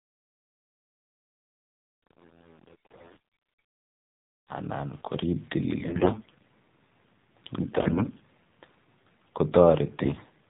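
Throughout, the speech carries the AMR narrowband mobile codec. It is band-limited to telephone width, with nothing above 4 kHz, and has a plainly audible buzzy, synthetic edge. That fits one of the lower AMR-NB modes, around 7.4 kbps, where the codec rebuilds each 20 ms frame from a vocal-tract model and a handful of excitation pulses, so fine detail of the voice is lost.

AMR bit errors then break through in four bursts: 2.74–3.18 s, 5.78–6.45 s, 7.66–8.23 s and 10.02–10.30 s. In each, flipped bits in the weakly protected part of the frames misplace the excitation pulses and corrupt the gain and spectral values. Pitch and loudness stay roughly intact, but the voice turns hoarse, scratchy and gargly. The first and third bursts carry the heavier error rate on the link, around 15% against roughly 10% in the other two.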